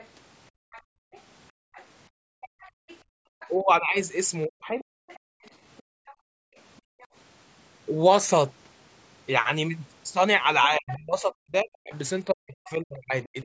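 A speech recording passed through call microphone processing, with nothing above 8 kHz. The other side's voice leaking through is audible as a faint second voice from 0.0 to 7.07 s, at about 25 dB below the speech. It returns louder, about 15 dB down, from 10.63 to 10.94 s, and faintly from 11.95 to 12.69 s. This is likely loudspeaker echo the canceller failed to remove. Background gated by the echo canceller makes the room sound drop out, by up to about 40 dB. This happens between 0.51 and 3.33 s and again between 5.19 and 7.0 s, covering roughly one and a half seconds and one second. Speech suppressed in double talk makes the talker's voice dip by up to about 40 dB from 3.61 to 4.87 s, for well under a second in total. It dips again from 10.67 to 13.36 s, for about two seconds in pieces. The likely cause is the canceller turning everything down while both sides spoke.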